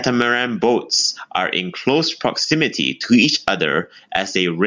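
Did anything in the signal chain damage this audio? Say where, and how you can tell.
Yes. Throughout the speech the level swings by around 15 dB, with loud and quiet passages pressed close together in level. That is gain pumping, most likely from an input gain set far too high at the microphone stage, with a fast limiter or compressor in the call chain clamping down on every peak and releasing in the gaps.

From 2.45 to 2.52 s, right after "boats are in close" and just before "to each", the level drops abruptly by about 6 dB for roughly 74 ms and then returns. A clean 6 dB step is what the mono sum shows when one of two stereo channels goes silent. This is a dropout of one channel, likely a momentary loss of one side in the wiring or at the converter input.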